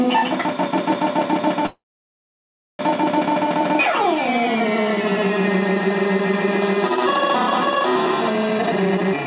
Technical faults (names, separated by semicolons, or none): call audio freeze; jitter buffer speed-up